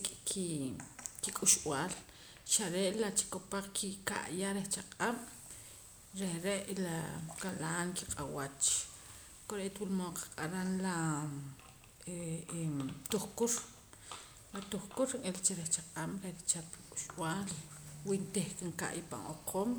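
No faults detected anywhere in the speech recording.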